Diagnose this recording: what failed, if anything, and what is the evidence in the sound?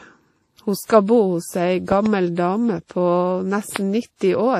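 Codec stage first. The whole clip carries the smeared, swirly texture of low-rate lossy coding, with a second layer of different artefacts stacked on top, and nothing above 15.4 kHz. That combination points to transcoding between lossy codecs, likely a low-rate MP3 around 40 kbit/s re-encoded to WMA 1 at about 64 kbit/s. The second encoder wastes its bits on the first one's mush and adds its own, so the extra bitrate doesn't help.

Then there are the loud pops, which most likely come from the analogue wiring: a plug, switch or static discharge dumping a voltage step into the line. From 1.92 to 2.08 s you get a quick double pop, peaking about 15 dB over the speech. At 3.76 to 3.78 s there's a single louder one, around 20 dB hot. The speech carries on underneath both, so it's something added to the signal rather than a dropout.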